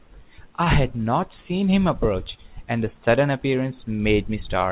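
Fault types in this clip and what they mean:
Short stall from a late packet: at 0.64 s a packet arrives late, the jitter buffer runs dry, and the receiver stretches the last speech sound for about 23 ms, then resumes from the same point. No speech is lost, but everything after lands 23 ms later. On a spectrogram, already empty above 4 kHz from the telephone-band codec, harmonics run flat and smeared from 0.64 to 0.69 s, and the waveform repeats near-identical cycles there.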